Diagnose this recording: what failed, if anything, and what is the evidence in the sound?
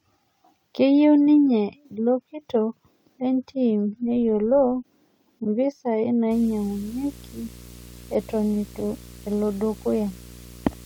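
A filter restarted on every block in the processing buffer. From 4.08 to 4.88 s, right after "ninye ilo kitok lentim", ticks form a 46.9 Hz buzz, which fits a 1024-sample block resetting to silence each time.

Video or display buzz is coupling into the analogue wiring. From 6.31 s to the end, a 60 Hz field-rate buzz with hash above it sits roughly 20 dB below the speech.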